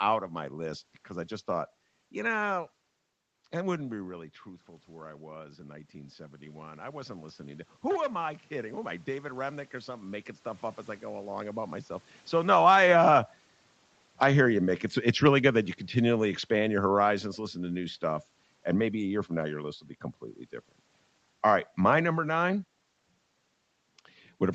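Right after "that wouldn't", at 3.91 s, the talker drops back about 14 dB and the automatic gain rises roughly 9 dB until 13.37 s, so voice and room noise swell together. From 12.34 s the talker comes close again, and the automatic gain falls about 8 dB by 19.09 s, just before "year from now your". Loud speech and its background sink together.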